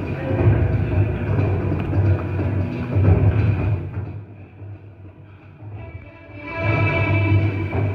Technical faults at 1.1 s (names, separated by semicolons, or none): none